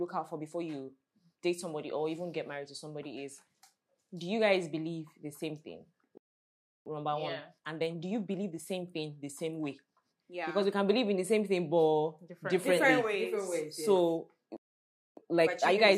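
At 6.18 s the audio cuts out in mid-flow and stays silent until 6.86 s, a gap of about 0.68 s. This playback stall is likely the player running out of buffered data or its output thread being blocked.

From 6.86 s to 9.86 s the audio runs at about 1.1 times normal speed while keeping its pitch. This is time-compressed catch-up: the player trims its accumulated backlog by removing short segments and cross-fading across the joins. The result sounds slightly hurried.

A second stall silences the output from 14.57 s to 15.17 s, about 0.60 s. It is followed by a stronger catch-up at about 1.25 times speed that lasts until the clip ends. The rush is more obvious here than in the first recovery.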